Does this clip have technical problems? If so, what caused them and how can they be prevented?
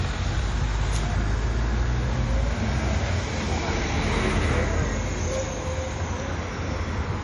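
Yes. Throughout, the audio sounds watery and swirly, with nothing above 11.3 kHz. The likely cause is MP3 compression at a low bitrate, around 48 kbps. A spectrogram would show a flat ceiling at 11.3 kHz and patchy gaps flickering below it. Encoding at a higher bitrate, or in a lossless format, prevents this.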